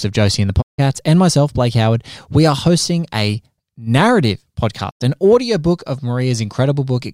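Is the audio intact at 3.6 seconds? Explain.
Yes, at 3.6 seconds the speech plays through intact, with no dropout, click, distortion or other fault at that moment.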